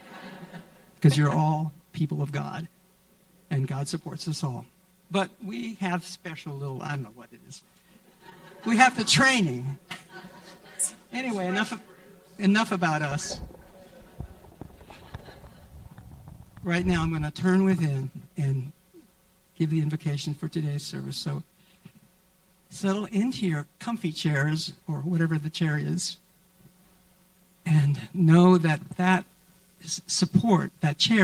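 Short concealed packet loss at 7.59–7.63 s and 8.30–8.33 s: about 20 ms went missing and was extrapolated, leaving a brief smear that shows as a smoothed, repeated spectrogram patch.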